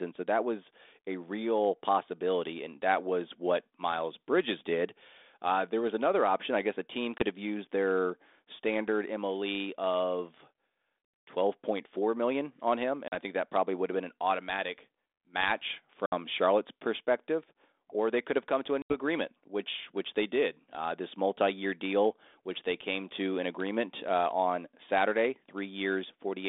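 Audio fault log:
7.18, 13.08, 16.06 and 18.82 s: packet loss on an ADPCM call. Silent holes of 20, 40, 60 and 80 ms end in slightly distorted speech while the decoder's predictor resyncs, unlike a clean dropout.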